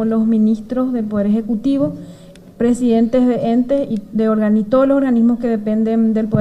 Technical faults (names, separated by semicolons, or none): none